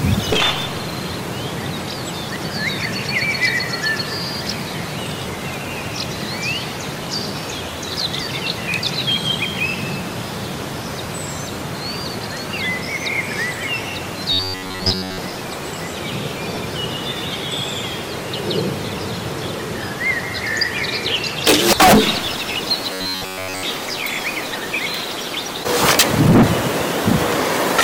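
From 14.33 to 15.18 s the sound turns into a rigid, metallic buzz pitched at about 94 Hz that still loosely tracks the underlying audio, with most of that stretch made of repeats. This is robotic sound from repeated short buffers. The likely cause is audio arriving too slowly, so the playback side loops a fragment of roughly 11 ms, the period of that 94 Hz buzz, while the real material in between is skipped.

At 16.55 to 16.57 s a brief noisy smear replaces the tonal content. These are lost LE Audio frames: 22.5 ms went missing, which fits three 7.5 ms frames. The LC3 decoder filled the gap by reusing the previous spectrum with randomised signs, which is why pitched components dissolve into noise for that instant.

The same buzz returns from 22.93 to 23.63 s, again at about 94 Hz. This time the whole stretch is repeated fragments.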